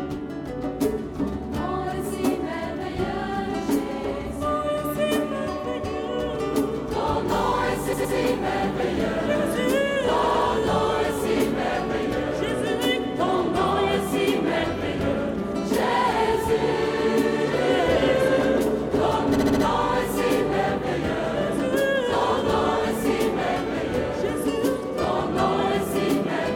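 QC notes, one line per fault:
7.92–8.15 s and 10.22–10.45 s, repeated frames: a 116 ms block plays three times in a row, adding 232 ms each time. The blocks suggest five-frame runs. Unlike an echo, each copy is identical and full level, with no gap.
19.34–19.62 s, repeated frames: a shorter 70 ms block plays five times, adding 279 ms, likely a three-frame run. Unlike a dropout, nothing goes missing; the same snippet is heard again.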